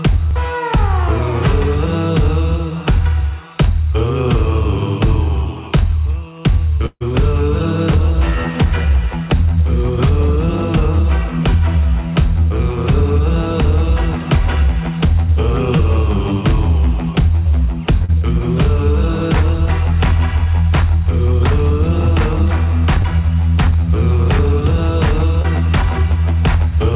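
Burst of packet loss, 6.86 to 7.02 s: about 140 ms of audio never arrived in time, so the receiver stretched the last sound over roughly 144 ms, fading it to about 50 ms of silence before playback jumps ahead past the lost stretch.

Short concealed packet loss at 15.76 to 15.81 s, 18.05 to 18.10 s, 23.02 to 23.06 s and 25.42 to 25.46 s: gaps of 20 ms, or 40 ms at 18.05 s, were patched by extending the preceding sound and blending back. Each gives a brief smear or wobble, all within a band that stops at 4 kHz.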